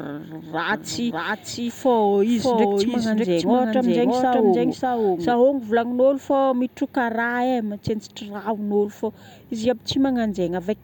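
From 0.72 s to 5.34 s the speech is heard twice, a doubled audio track. A second full-band copy trails about 0.7 s behind, roughly as loud as the original. It has no decay or room colour. It starts and stops abruptly, likely from a slower second capture path.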